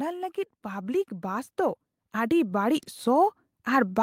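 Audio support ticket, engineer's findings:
Automatic gain rising from 0.62 s to end of clip. Speech and background noise floor swell together, gradually. Probable component: AGC on capture path. Input read as too quiet, so gain ramped up steadily. Still climbing at cutoff. No plateau reached. Check AGC target level and release rate.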